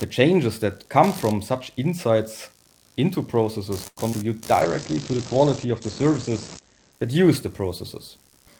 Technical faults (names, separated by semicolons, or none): computer activity noise; short stall from a late packet; short concealed packet loss; call bitrate drop; jitter buffer slow-down